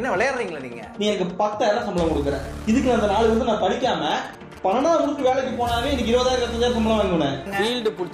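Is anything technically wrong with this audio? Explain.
Yes. GSM signalling bursts occur from 4.10 to 5.29 s. A nearby 2G phone that is only signalling, not carrying a call, radiates short groups of transmission bursts, and some stage of the audio circuit rectifies that radio energy into the signal. The result is a galloping dit-dit-dit run of brief buzzes repeating at about 217 Hz, sitting roughly 20 dB below the wanted sound.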